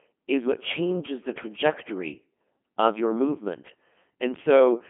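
Speech run through a Codec 2 vocoder the whole way, so it's rebuilt from sine waves: robotic, buzzy, heavily damaged, band-limited to about 150 Hz–3.4 kHz, consistent with a 2.4 kbit/s mode.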